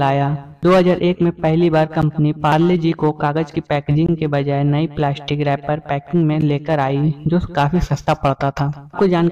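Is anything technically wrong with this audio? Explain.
Yes. The audio has three blocks of digital silence. The first is at 2.02 s and lasts about 11 ms. The second runs from 4.06 to 4.09 s, about 21 ms. The third is at 6.41 s, again about 11 ms. In each, the output was likely not filled in time. The lengths fit a 512-sample buffer, doubled for the middle one. The sound cuts off and returns with no fade. The short ones click like ticks. The longer one is a brief hole.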